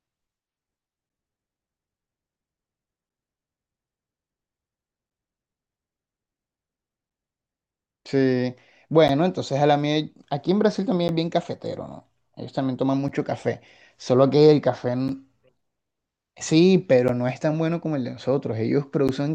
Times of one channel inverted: none

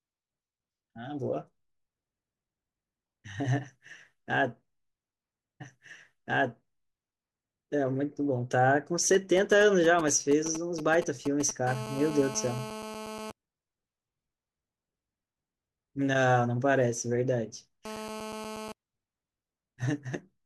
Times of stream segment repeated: 5.60-7.59

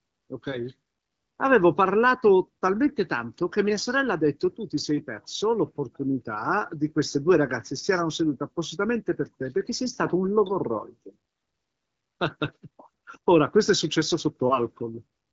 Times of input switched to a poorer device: none

